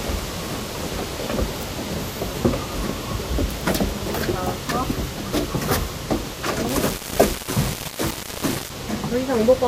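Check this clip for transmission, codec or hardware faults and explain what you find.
One fault stands out: low bit depth without dither from 6.69 to 8.70 s. The audio is likely rounded to about 5 bits, so the error tracks the sound, nearly as loud as it, giving grainy distortion. Waveforms show stair-steps; spectrograms show broadband grit following the signal.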